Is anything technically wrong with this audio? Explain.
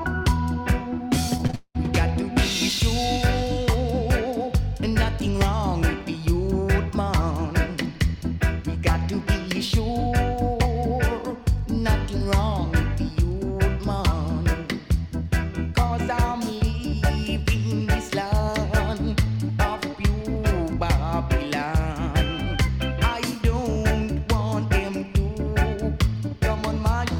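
Yes. From 1.37 to 1.76 s there is repeated packet loss (robotic sound): four gaps in quick succession, the longest 195 ms, each patched by extending the preceding audio, so about 64% of that stretch is concealed. It sounds choppy, with pieces missing. A spectrogram shows smeared, repeated frames and abrupt seams.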